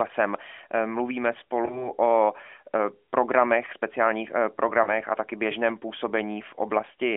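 Radio errors corrupted speech frames, and the AMR decoder covered each gap by replaying the last good pitch and vocal-tract settings at reduced gain. These lost AMR speech frames, each likely a single 20 ms frame, cause brief dips or warbles at 1.66–1.92 s and 4.84–4.89 s.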